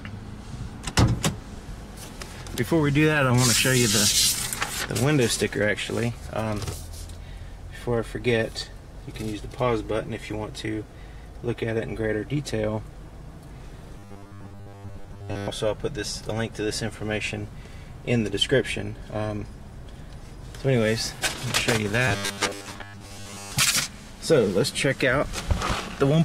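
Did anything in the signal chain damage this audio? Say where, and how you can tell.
Yes. Robotic sound from repeated short buffers occurs at 13.99 to 15.52 s and 22.08 to 23.53 s, likely from a starved driver or buffer stage looping 10 ms blocks. The result is a rigid 100 Hz buzz, visible as evenly spaced 100 Hz harmonic lines on a spectrogram.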